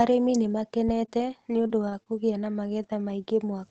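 At 0.89 to 0.94 s, a supply switching on or off on the live input sends a voltage step through the coupling capacitors, producing a phantom power thump: a deep, brief knock that dies away quickly, fading within about 12 ms.

From 1.05 to 2.14 s comes repeated packet loss (robotic sound). Four holes, the longest about 22 ms and totalling 80 ms, are each patched by extending the preceding sound. The speech turns choppy, with roughly a tenth of a second rebuilt. The Opus call path caps the band near 8 kHz.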